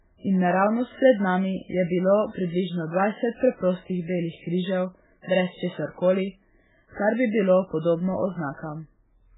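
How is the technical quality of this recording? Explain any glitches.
Quality's poor: the speech carries heavy codec damage from start to finish. Throughout, the sound is watery and swirly with nothing above 3.8 kHz. That's likely MP3 compression at a very low bitrate, around 8 kbps: starved of bits, the encoder drops weaker frequency detail frame by frame and cuts the top end entirely.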